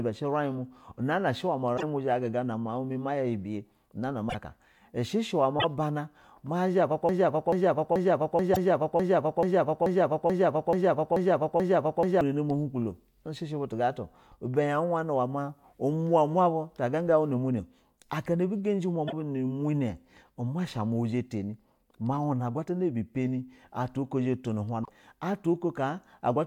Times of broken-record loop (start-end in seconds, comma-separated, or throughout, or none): 7.09-12.21